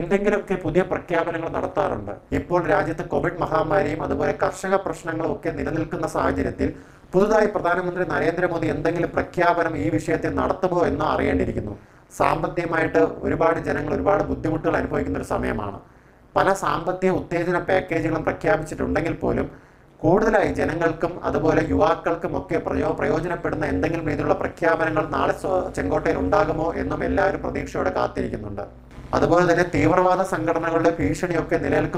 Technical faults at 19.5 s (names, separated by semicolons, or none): overlap-add ripple